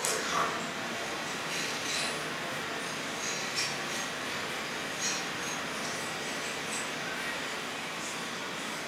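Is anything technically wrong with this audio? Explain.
No, nothing technically wrong stands out here, and the recording comes across as sound and steady all the way through.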